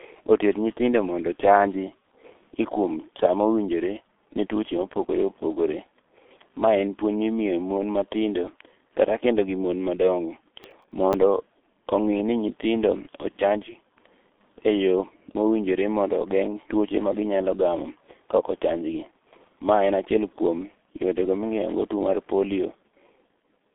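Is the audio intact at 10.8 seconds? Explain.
No. From 10.63 to 11.14 s, processor overload crackle tears through the speech. Several short buffers of around 10 ms each missed their deadline and replayed stale audio with hard edges. Unlike a single dropout or click, this is a dense, gritty burst that stops cleanly. Under it, heavy G.723.1 coding at 6.3 kbit/s leaves nothing above 3.8 kHz. The speech sounds hoarse with smeared consonants, not just muffled like a plain low-pass filter.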